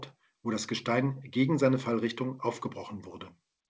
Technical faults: none

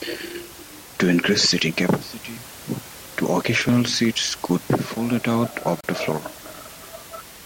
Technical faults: gap between stream segments

